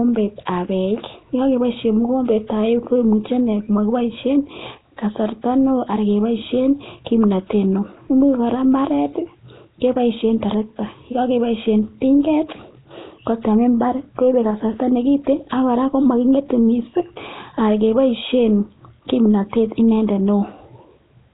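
Throughout, speech has a hissy halo and underwater smear, with nothing above 3.9 kHz. Noise-filled bands rather than MP3-style swirl point to heavy, likely Nellymoser compression.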